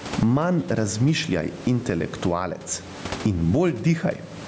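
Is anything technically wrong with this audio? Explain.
Yes. Gain pumping runs throughout: the input gain is likely set too high, so a fast limiter clamps each loud syllable, swinging the gain by about 20 dB.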